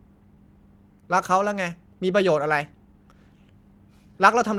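Throughout the speech, clock drift between sender and receiver is at work: the sender's clock runs roughly 1.5% slow, so the receiver's buffer keeps draining. Unlike network jitter, the disturbance never reverses direction; it is a steady, one-way lag that persists across the whole clip.

From 0.35 s to 4.14 s, repeated timing corrections follow from that lag. The receiver repeatedly duplicates short slivers of audio, stretching the passage by about 70 ms overall, so it plays at about 99% speed. Each correction is small, so if heard at all they come across as small, unevenly spaced hiccups and a faintly unsteady tempo.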